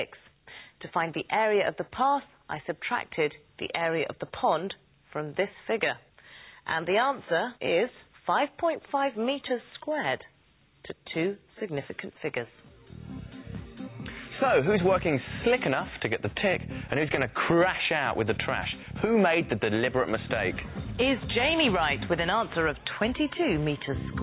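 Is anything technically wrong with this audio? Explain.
No, nothing stood out as technically wrong when listening to this audio.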